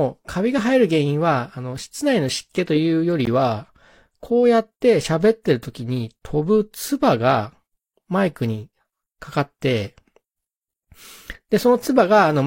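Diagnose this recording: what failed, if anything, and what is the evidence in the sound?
A brief, hard-edged drop to silence, about 16 ms long, cuts into the speech at 3.25 s. This is a gap between stream segments at the playback stage: the time stamps of two adjoining 4-second segments leave a hole, which the player fills with silence, adding time without losing audio.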